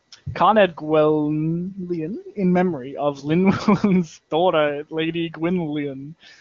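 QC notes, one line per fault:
No faults are heard anywhere in the speech. It comes through the AMR wideband (HD Voice) codec with nothing above 7.3 kHz and codec damage faint at most, which fits that codec's highest rate.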